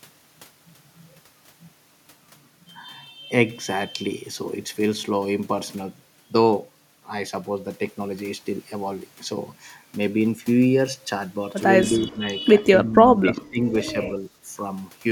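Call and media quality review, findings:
Speech suppressed in double talk: level dips at 11.89–12.27 s, 12.76–13.02 s and 13.23–13.66 s, roughly 10 to 15 dB down, choppy. Likely the echo canceller, unable to separate near-end speech from loudspeaker echo, ducking both.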